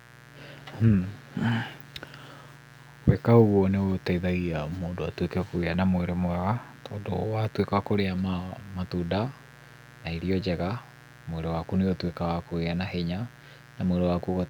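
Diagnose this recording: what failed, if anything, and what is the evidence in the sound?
The analogue wiring let in mains buzz: a steady, raspy buzz runs under the speech for the whole clip, sitting roughly 25 dB down. It's built on 60 Hz, with sharp switching spikes twice per cycle spraying harmonics up into the kilohertz range.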